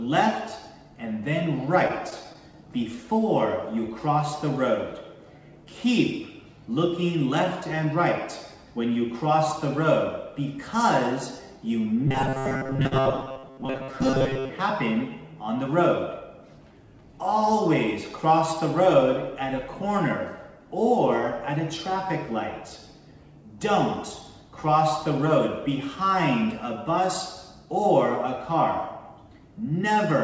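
From 1.88 to 2.56 s there are repeated stalls (stutter): five brief gaps, the longest 13 ms, where packets arrived late and the jitter buffer ran dry. The receiver extended the preceding sound each time, 53 ms in total, so nothing is lost but the passage hitches and drags.

Between 12.1 and 14.5 s the sound turns rigid and metallic, with a fixed 133 Hz buzz over most of the span. This is likely robotic sound from repeated short buffers: a segment of about 7.5 ms looped while fresh audio arrived too rarely, so the repetition rate imposes a fixed buzz.

Inside that span, from 12.87 to 12.94 s, a short stall from a late packet adds a hold. Delay jumped by 44 ms, and the receiver stretched the last sound for 44 ms before resuming at the same point, giving a brief sustained, slightly buzzy dip.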